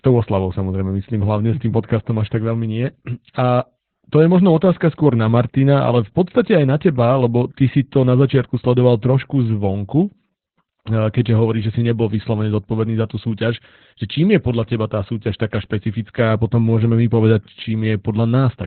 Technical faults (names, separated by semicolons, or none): Opus voice compression